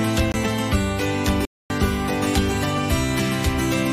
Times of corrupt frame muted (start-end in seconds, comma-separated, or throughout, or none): 0.32-0.35